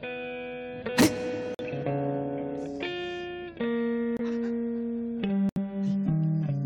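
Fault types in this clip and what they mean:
Corrupt frame muted: The decoder rejected damaged compressed frames, and silence replaced them. The music cuts out abruptly at 1.54, 4.17 and 5.49 s, for about 60, 44 and 78 ms. Each gap spans a few frame lengths. Timing stays intact.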